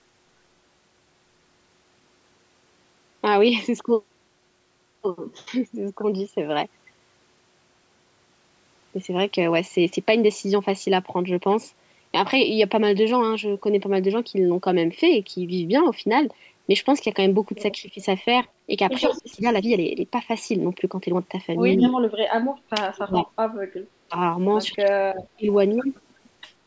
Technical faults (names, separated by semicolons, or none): speech suppressed in double talk; echo leak